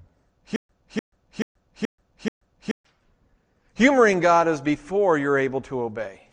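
From 0.56 to 2.85 s the speech falls into a stutter with silent gaps. One 298 ms fragment repeats five times with 132 ms of digital silence after each, likely from a stalled stream replaying its last buffer. The waveform shows identical blocks separated by flat lines, and the spectrogram shows matching patterns split by blank columns.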